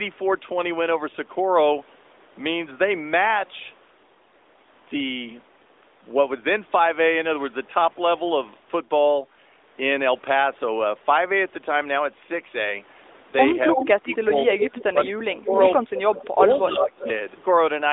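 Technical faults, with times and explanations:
13.73–14.17 s, 14.49–15.10 s, 15.51–16.38 s and 16.74–17.12 s, echo leak: a delayed copy of the speech trails behind, at first about 5 dB under the direct signal and later about 10 dB under, lagging by 0.30 to 0.31 s. This is likely a far-end loudspeaker echo that the canceller failed to fully remove.
14.91–15.51 s and 16.40–16.99 s, speech suppressed in double talk: the speech dips by up to about 15 dB, losing roughly 0.4 s in pieces during each stretch while the echo overlaps it. This is likely the echo canceller, unable to separate the talker from the echo, turning both down.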